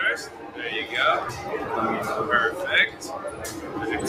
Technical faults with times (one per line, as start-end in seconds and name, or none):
0.00-4.08 noise suppressor applied to music or sounds
0.25-0.59 sound cut by the noise suppressor
2.90-3.76 sound cut by the noise suppressor